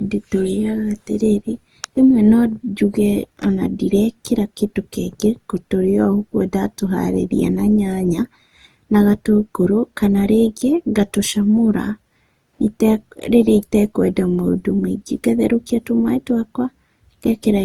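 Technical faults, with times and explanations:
Throughout: generation loss. The speech sounds swirly, smeared and hollow, with blurred consonant onsets, more damaged than a single pass at 48 kbit/s would leave. This points to Opus, likely re-encoded around five times, each pass adding fresh quantisation noise.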